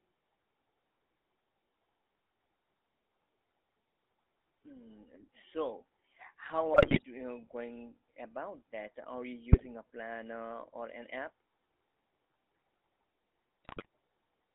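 Speech, and it's been through the GSM full-rate codec the whole way: the band sits at roughly 250 Hz to 3.6 kHz, and there's that buzzy, gravelly roughness from the pulse-driven vocal-tract model, which fits the old 13 kbps coder. On top of that come GSM bit errors at 6.74–7.02 s, 9.52–9.67 s and 13.64–13.86 s, where the audio breaks into squawks and gargling. Corrupted filter, pitch and gain values are scrambling those frames, consistent with a bit error rate of a few percent.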